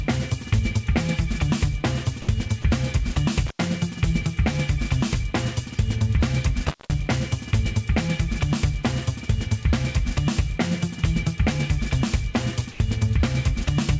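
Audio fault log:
2.22–2.28 s, 2.62 s, 3.14 s and 12.72–12.80 s, sound dropped by the voice detector: the sound briefly gives way to a soft, even noise bed, from a 20 ms blip up to about 80 ms at 12.72 s, and then snaps back. That's likely the sender's voice detector mistaking a quiet stretch for background and pausing, with the receiver filling the gap with comfort noise, so you hear smooth hiss instead of the real sound.
3.46–3.62 s and 6.67–6.94 s, intermittent contact: the audio cuts out with a crackle on either side, about 90 ms of gap the first time and nearly 0.2 s the second, leaving just faint hiss while the line is open. It's a loose plug or cable breaking the connection for a moment. The crackle is the contact scraping as it opens and closes, and the dropouts sit on top of the call's band-limited sound, which stops at 8 kHz, as you'd expect from G.722 at 64 kbps.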